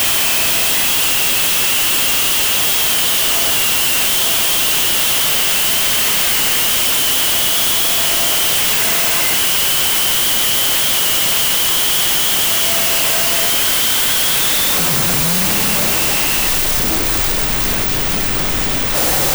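From start to end, loud hiss buries the sound, which plays at half speed an octave low: a wrong sample width, likely 32-bit float data read as 16-bit integers.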